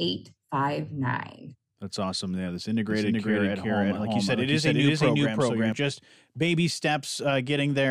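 From 2.90 s to 5.72 s the speech is doubled: a second full-band copy runs roughly four tenths of a second behind the original at about the same level, giving a clean, undecayed echo with no room colour. The copy cuts in and out abruptly, starting just before "just baby". This doubled audio track likely comes from the signal being captured a second time through a slower path, or from an edit that leaves two copies out of step.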